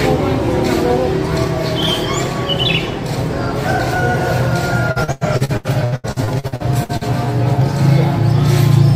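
From 4.91 s to 7.04 s the sound turns choppy and robotic, broken by a rapid run of short holes, the longest about 94 ms. This is repeated packet loss: successive gaps were patched by extending the last sound, leaving about 37% of that stretch synthesised.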